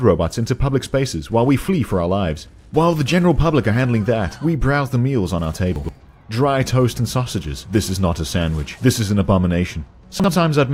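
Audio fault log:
5.76 to 5.89 s and 10.20 to 10.28 s, chunks out of order. A 43 ms block plays late, two blocks behind first, then one. Nothing is lost, but the sequence jumps. Three hard joins at each spot cause a brief jumbled stutter.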